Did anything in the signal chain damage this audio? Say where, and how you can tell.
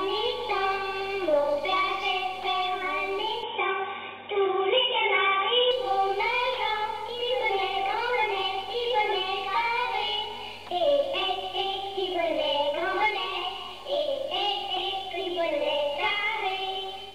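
Yes, at capture: from 3.43 to 5.71 s everything above 3.8 kHz vanishes and the level shifts a few dB, likely the input switched to a poorer device.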